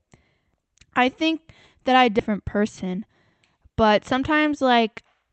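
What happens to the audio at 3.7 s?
A jitter buffer speed-up runs from 3.56 s to 4.78 s, covering the moment asked about. The receiver's jitter buffer had built up more audio than it wanted, so to bring the delay back down it repeatedly cut out short pieces one or a few pitch periods long, removing about a tenth of a second in total. The speech plays about 7% faster at the same pitch and sounds hurried through that stretch.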